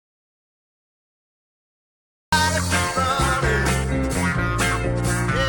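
Right from the top, the first 2.32 seconds are an audio dropout to silence. The file opens already in that state, with dead silence and not even a trace of room tone, and then the sound suddenly kicks in mid-flow at 2.32 s. The likely cause is the input going missing for that stretch, from an unplugged device, a dropped link or a stray mute, while the recorder kept writing nothing. Whatever happened during that opening gap simply isn't there.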